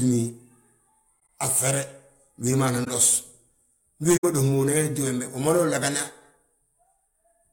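Damaged AAC frames were detected by the decoder and concealed rather than played as garbage, which is the corrupt frame concealed fault. The first runs from 1.20 to 1.29 s. The second, from 2.83 to 2.88 s, follows "wédi ma nan". The third, from 4.16 to 4.24 s, comes just before "ma dos mo unan". Each one's length points to a handful of lost frames.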